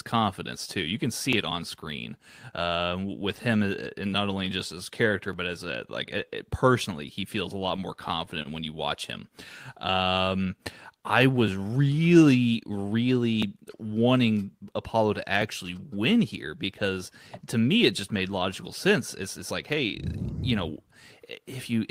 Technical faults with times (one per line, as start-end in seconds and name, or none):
7.59-8.47 repeated stalls (stutter)
9.76-10.46 jitter buffer slow-down
12.53-12.99 jitter buffer speed-up